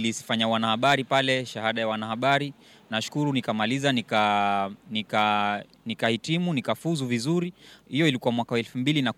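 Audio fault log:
0.86–1.19 s, 2.29–2.35 s, 3.88–4.24 s, 5.18–5.24 s, 6.04 s: hard clipping. Crackly fuzz on loud speech peaks, which overshoot the signal's limit by about 1 to 4 dB and are cut flat, adding high harmonics.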